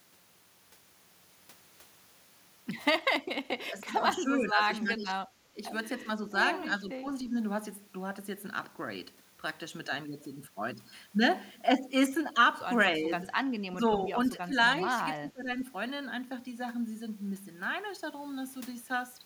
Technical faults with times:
3.58-5.62 speech suppressed in double talk
5.98-6.34 speech suppressed in double talk
6.70-7.33 speech suppressed in double talk
12.96-13.23 speech suppressed in double talk
13.68-14.55 speech suppressed in double talk
15.00-15.61 speech suppressed in double talk

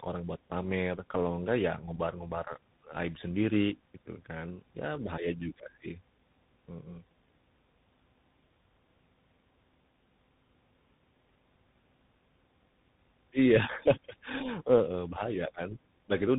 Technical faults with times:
0.00-16.38 tandem speech coding

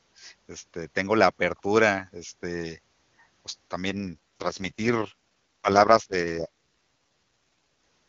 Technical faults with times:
3.85-6.48 AMR rate drop

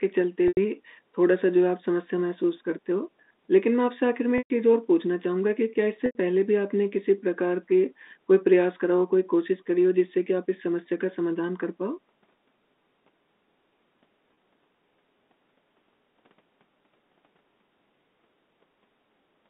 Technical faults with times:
0.48-0.57 packet loss with pitch repetition
4.38-4.50 packet loss with pitch repetition
6.06-6.15 packet loss with pitch repetition
14.34-14.37 packet loss with pitch repetition

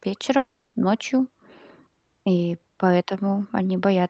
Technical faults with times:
0.37-0.75 long network dropout

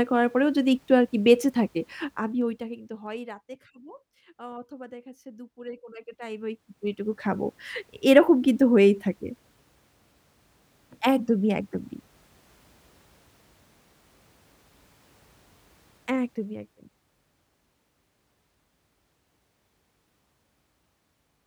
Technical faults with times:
1.95-3.44 zipper noise
5.85-7.34 zipper noise
15.88-16.72 zipper noise

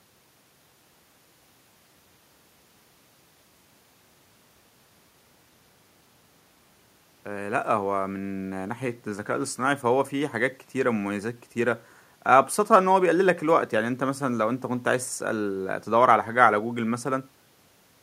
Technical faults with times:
none

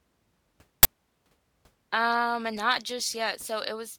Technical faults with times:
0.83-0.85 uninitialised buffer

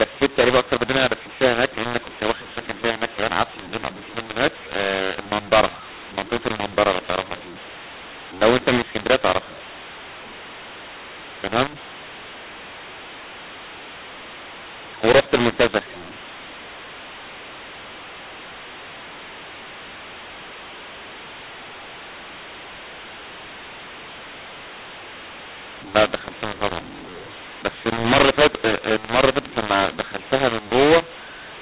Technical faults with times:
0.00-31.62 mu-law and A-law mixed up

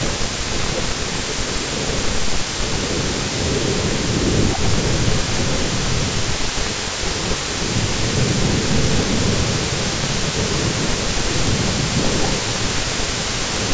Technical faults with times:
0.00-2.74 speech suppressed in double talk
0.00-13.73 echo leak
3.77-6.05 speech suppressed in double talk
7.47-10.07 speech suppressed in double talk
10.69-11.07 speech suppressed in double talk
11.42-11.50 speech suppressed in double talk

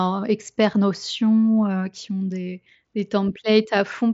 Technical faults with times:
none

